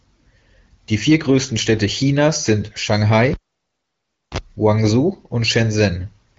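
Cable pulled and plugged in, from 3.34 to 4.38 s: a pop as the live lead comes out, then near silence for about 1.0 s, a 39 ms burst of 60 Hz mains buzz while only the tip touches, and a second pop as the speech returns. Throughout, the speech stops near 7.6 kHz with the light smoothing of an AMR wideband (HD Voice) codec, which fits a rate of around 16 kbit/s.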